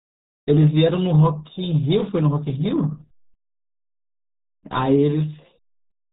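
From start to finish the speech carries the sound of the RealAudio 14.4 codec, an early dial-up format whose heavy damage points to a bitrate near 8 kbit/s. Everything above 3.8 kHz is gone, so the voice turns muffled and gargly, with a watery, bubbling edge on every syllable. On a spectrogram the energy stops at a hard ceiling around 3.8 kHz, and the harmonics below look smeared and blotchy rather than cleanly striped.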